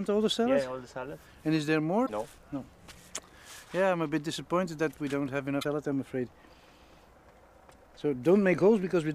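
At 2.03 to 2.10 s, 5.58 to 5.65 s and 7.72 to 7.74 s, the sound briefly breaks up into a chirp, squawk, click or short hole. This is damaged data in a compressed stream: corrupted bytes make the decoder misread those frames and lose sync until it finds the next valid frame header. A simple dropout would leave silence and a buffer glitch a flat click, but here the decoder turns the bad data into a brief disturbance.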